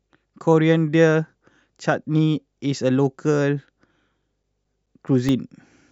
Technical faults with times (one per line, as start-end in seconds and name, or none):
4.00-5.29 CD scratch ticks